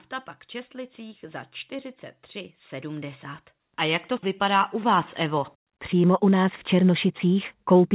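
From 2.32 s to 7.58 s there's automatic gain rising. The AGC decided the input was too quiet and slowly pushed it up by about 10 dB, so the speech and background swell together. Throughout, nothing comes through above 4 kHz, which fits a narrowband call codec like G.711.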